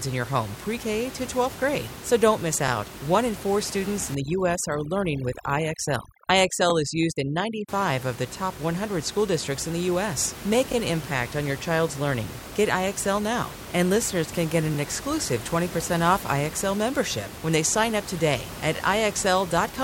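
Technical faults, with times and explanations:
2.68 s, 6.70 s and 18.77 s: overlapping chunks. The audio is handled in blocks of 4.0 s, and each new block begins slightly before the previous one ends, so at these joins a 21.33 ms slice plays a second time. Because the same fragment of sound is heard twice, each join produces a brief click or stutter. The three hits fall on the block grid, with 18.77 s three blocks after 6.70 s.
4.15 to 7.69 s: overdone noise removal. A noise reducer set far too aggressively is cutting individual frequency bands down or out whenever they come close to its noise estimate. The room noise, normally about 14 dB below the speech, drops and breaks up into scattered twinkling specks. The quieter parts of the speech are removed along with the noise.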